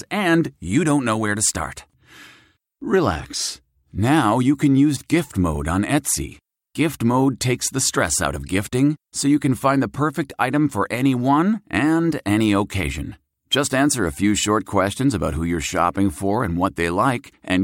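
No technical faults can be heard at any point in the speech.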